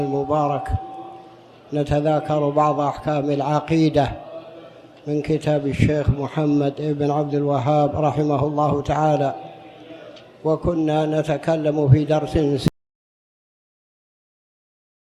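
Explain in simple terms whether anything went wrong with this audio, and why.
At 12.68 s the sound stops abruptly and never returns, leaving dead, total silence through to the end with no background hiss at all. This is an audio dropout to silence, likely from the input being disconnected or muted while recording carried on writing nothing.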